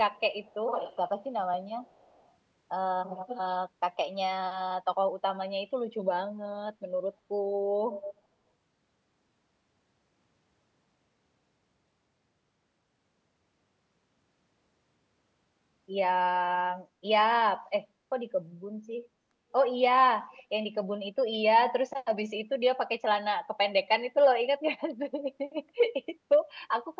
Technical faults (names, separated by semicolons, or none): echo leak